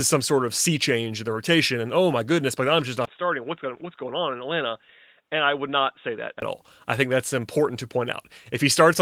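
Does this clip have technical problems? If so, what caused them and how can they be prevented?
Yes. After "goodness but I'm just", at 3.05 s, the speech goes dull and boxy: nothing above 3.8 kHz, a drop of roughly 5 dB, a faint new noise floor well below the signal, and a brief 20 ms silence at the switch. Full bandwidth returns at 6.42 s, before "all I think that's". This is likely an input switched to a poorer device, such as a headset call profile. To prevent it, lock the recording input and disable automatic device switching.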